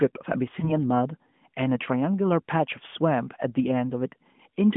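At 0.60 s the speech briefly dips or warbles, recovering by 0.73 s with a moment of weak or rough sound. This is lost AMR speech frames: a single 20 ms frame was corrupted, so the decoder filled in by repeating the last good pitch and vocal tract settings at falling gain.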